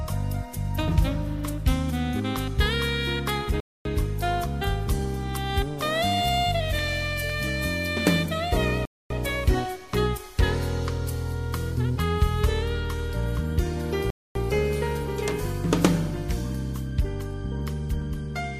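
Gaps between chunks at 3.60, 8.85 and 14.10 s, each lasting 250 ms. The audio arrives as 5.0-second blocks, and a stretch of silence is inserted at every join instead of the next block following on directly. Nothing is cut from the sound itself; it simply stops dead and resumes a quarter-second later. Because the blocks are equal in length, the holes recur at a steady 5.25-second spacing, each with abrupt edges.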